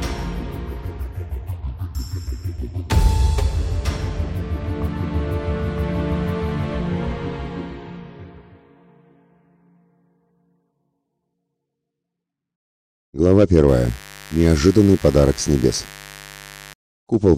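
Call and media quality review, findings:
Mains buzz, 13.68 to 16.74 s: steady raspy buzz sitting roughly 20 dB under the signal. Spiky switching noise twice per 50 Hz cycle, harmonics up into the kilohertz range. Probably a dimmer, rectifier or unshielded run coupling into the line.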